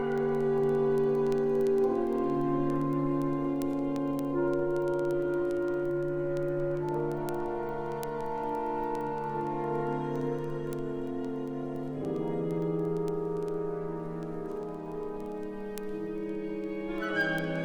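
Word clock ticks run through the audio from 0.12 s to 17.61 s: sharp, uneven clicks roughly every 50 ms, some 300 in all. The receiver is running unlocked to the sender's clock, off by around 400 ppm, so a single sample slips at each crossing.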